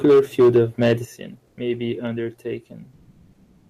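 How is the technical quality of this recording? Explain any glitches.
The recording has clear technical problems: harsh distortion at the start, two sudden level drops, and two stretches where the natural background turns into flat, artificial hiss.

From 0.04 to 0.93 s the loudest parts crackle with a hard, gritty edge. This is microphone overload: the peaks ran about 6 dB past the converter's limit, flattening the tops of around a tenth of the waveform. The likely cause is an input level set too high.

At 0.05 s the level dips by about 2 dB, and at 1.05 s, just before "may be", it drops by about 8 dB. Both sound like the microphone volume stepped down, likely the call software cutting the input gain.

At 1.47 to 1.55 s, just before "may be", and again from 2.95 s to the end, the background becomes steady, featureless noise. This is comfort noise in place of the background, likely from Opus discontinuous transmission.

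The first patch lasts 80 ms and sits about 1 dB below the real background. The second lasts 0.75 s and is about 9 dB louder than the real background.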